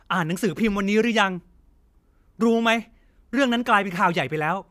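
No technical faults can be heard anywhere in this short speech recording.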